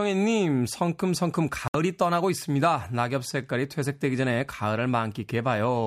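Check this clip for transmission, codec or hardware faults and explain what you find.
One fault stands out in this speech clip: a digital broadcast dropout. It runs from 1.68 to 1.75 s. The receiver stopped getting usable frames, either because the signal was lost or because frames failed their checksum. It muted rather than play corrupt data. About 64 ms of speech is gone, which fits two lost frames. You hear a sudden hole of silence. Then the speech resumes further along, with the missing stretch simply skipped.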